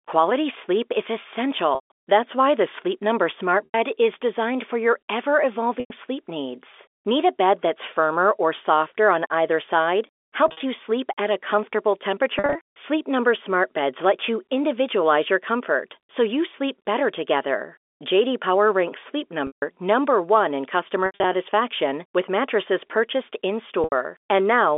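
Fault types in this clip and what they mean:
packet loss with pitch repetition: Eight short blemishes between 1.75 s and 23.84 s sound like the speech briefly sticking on a held, buzzy tone that fades out instead of dropping to a clean gap, for instance after "softer on either side" and after "with mattresses purchased". Each loses 80 to 150 ms of audio, some in scattered runs of up to 80 ms. The receiver bridges each hole by repeating the last pitch period and fading it down.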